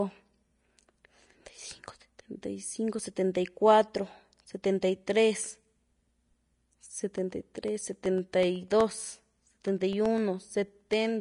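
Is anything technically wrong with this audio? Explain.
Yes, there are two faults.

Vorbis compression affects the whole clip. An encoder, likely Vorbis at a low bitrate around 34 kbps, has coarsely quantised the speech and discarded everything above 10.6 kHz. It rebuilds the missing fine detail as noise-like filler over a smoothed spectral outline. The result is plainly audible: the top end stops abruptly at 10.6 kHz, and the speech sounds grainy and hissy, with roughened tones and smeared onsets.

Periodic USB or driver dropouts run from 7.18 s to 11.06 s. Something in the playback or capture chain stalls the audio stream every 0.125 s, about eight times per second. Each stall loses roughly half a millisecond of audio, and that gap is filled with silence. Around thirty of these tiny holes cut into the waveform, producing a steady rhythm of ticks that is audible only while the speech is sounding.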